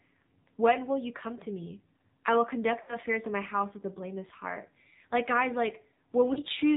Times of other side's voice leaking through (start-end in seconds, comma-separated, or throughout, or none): none